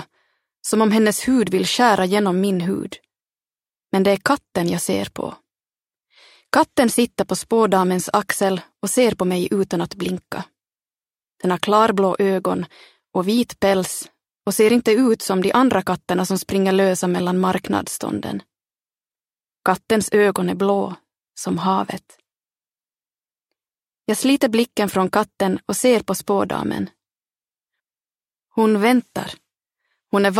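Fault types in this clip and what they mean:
No technical faults are audible.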